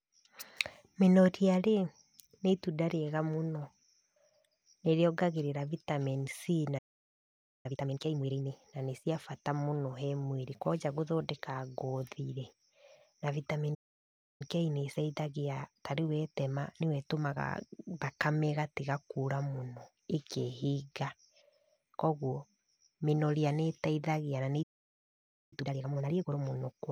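The speech cuts out three times in a playback stall. Each time the player has most likely run dry of data or had its thread held up, so the output just goes silent mid-flow. The first is from 6.78 to 7.66 s, close to 0.86 s. The second runs 13.74 to 14.42 s, about 0.66 s. The last is right after "mĩnoria nĩteithagia na nĩ", from 24.62 to 25.53 s, nearly 0.89 s.

Each gap is followed by time-compressed catch-up, where the player trims its backlog by snipping out small slices and cross-fading the joins. Pitch stays put, but the talking sounds rushed. After the first and third stalls it's blunt, at double speed, from 7.66 to 8.52 s and from 25.53 to 26.41 s. The middle one is gentler at 1.1 times speed, stretching from 14.42 to 17.42 s, just before "thakame ĩgatiga kũra mũno".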